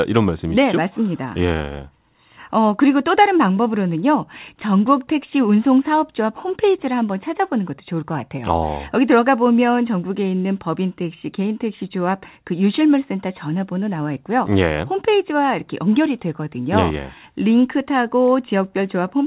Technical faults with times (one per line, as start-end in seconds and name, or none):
none